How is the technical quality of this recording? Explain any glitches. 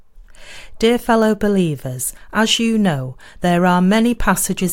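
No glitches can be heard anywhere in the recording. The speech runs without any break, dropout or other disturbance.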